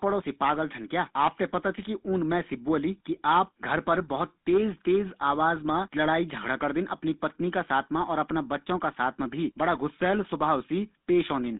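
From start to finish, this speech has passed through a GSM full-rate codec. The voice sounds buzzy and gravelly. The codec models the vocal tract and drives it with sparse, regular pulses, which fits a 13 kbps GSM stream. The band runs from 200 Hz to 3.6 kHz.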